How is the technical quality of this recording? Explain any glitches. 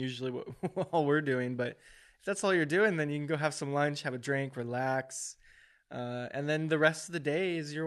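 The technical quality of this speech recording is sound, with no glitches to explain.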